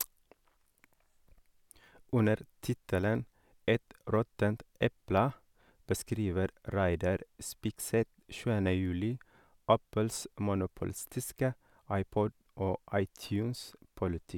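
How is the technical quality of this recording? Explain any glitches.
No technical faults are audible anywhere in the recording, so there are no glitches to explain.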